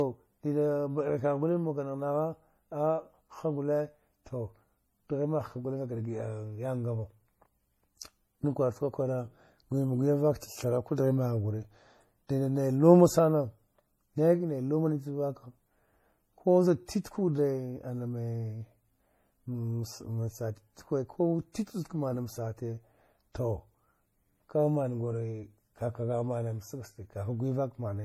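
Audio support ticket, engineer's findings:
Transcoding between lossy codecs, whole clip. Speech band-limited, nothing above 16.5 kHz. Two overlapping sets of coding artefacts, heard together. Likely MP3 then HE-AAC, both sounding near 40 kbit/s. Second encoder spends bits on first encoder's errors, adding its own.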